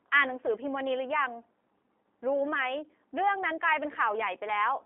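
From start to finish the speech carries G.729 codec damage, which fits an 8 kbit/s G.729A stream. The band runs only from 250 Hz to 3.5 kHz, so it sounds thin and boxy. The pulse-based rebuild of each 10 ms frame leaves a plainly audible rough, synthetic edge.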